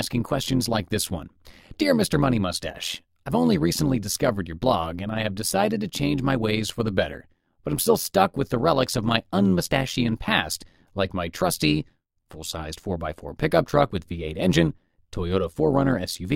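From start to finish the speech carries overlap-add ripple: the frames were windowed and stitched back together with an overlap that doesn't sum flat, so the level dips by about 11 dB around a hundred times a second, giving a buzzy, metallic quality over everything.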